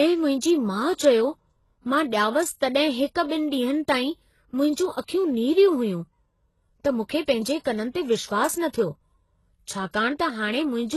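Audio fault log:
throughout: transcoding between lossy codecs. The speech has nothing above 12.3 kHz. Two different kinds of coding smear are heard together. The likely cause is Vorbis near 34 kbit/s followed by HE-AAC near 16 kbit/s, which spends its few bits on the earlier artefacts.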